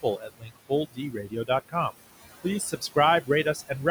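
Throughout the clip, the background room noise, sitting about 14 dB below the speech, drops away in the gaps and swells back under each phrase. These are noise suppressor artifacts: the suppressor pulls down bands it judges to be steady noise by about 18 dB, frame by frame.

From 0.02 to 1.5 s, parts of the speech sound swallowed and faint, losing as much as about 22 dB across roughly 0.7 s in total. Softer stretches go under again from 2.71 to 2.96 s (about 18 dB, briefly) and from 3.21 to 3.85 s (about 20 dB, around 0.2 s in all). This is speech cut by the noise suppressor, which mistook those quiet sounds for background and lowered them with it.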